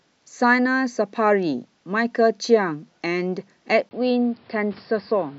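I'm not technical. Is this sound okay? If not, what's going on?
No. At 3.89 s, after a tiny gap, the speech goes dull and boxy with faint new background noise, likely an input switched to a poorer device.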